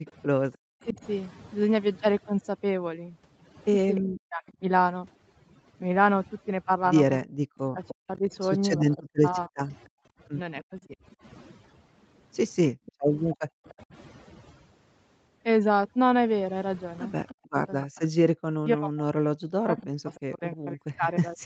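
Overdone noise removal runs through the whole clip. The suppressor pushes any band that sits near its noise estimate far down, taking quiet parts of the speech with it. The background becomes near-silent with twinkling specks, and the voice sits against its 8 kHz upper limit.

Echo leak starts at 0.07–0.54 s and returns at 3.97–4.51 s, 7.88–13.73 s and 17.27–20.2 s. A delayed copy of the speech trails it by 300 ms, sitting roughly 20 to 30 dB below the main voice. It is faint in the first event and stronger in the later ones. The likely cause is a loudspeaker on one side whose echo canceller let part of its own playback back into the microphone and returned it.

Speech suppressed in double talk appears at 0.56–0.99 s, then across 4.0–10.9 s, and again from 17.36 s to the end. The talker's voice sinks by as much as about 40 dB, thinning or breaking into fragments, for roughly 0.4 s in the first event and 1.5 s in the second. 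This likely happens because the canceller confused overlapping talk with echo and attenuated both.

Background gated by the echo canceller occurs during 9.88–13.66 s. The room tone drops by up to about 40 dB for around 0.7 s in total, then springs back when the canceller releases the microphone after loudspeaker playback.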